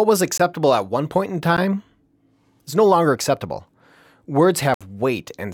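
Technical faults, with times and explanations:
0.38 s, 1.57 s and 4.74–4.81 s, block of digital silence: the audio drops abruptly to nothing with no fade, for 18 ms just before "at one point in", 13 ms just after "at one point in", then 64 ms. The 13 ms gap is short enough to register as a tick or dip, and the 64 ms gap as an audible hole. The output received a block of zeros instead of audio, either because the buffer was not filled in time or because a calculation produced invalid values. The waveform shows flat lines with sharp edges, and the spectrogram shows blank vertical strips across all frequencies.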